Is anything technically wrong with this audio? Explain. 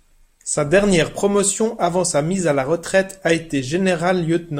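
No, nothing technically wrong stands out anywhere in this speech recording, so there's nothing here to flag.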